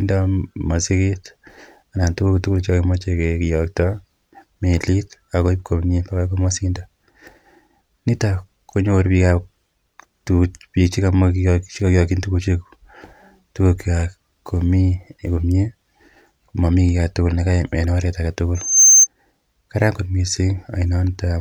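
Right near the end, from 18.55 to 19.07 s, there's a burst of loudspeaker feedback squeal. The mic was catching its own speaker output, and at around 6.3 kHz the loop gain crept past one, so that frequency fed on itself. You hear a thin, piercing whistle swell up over about a third of a second until it sits roughly 10 dB above the speech, then it cuts out about half a second after it started.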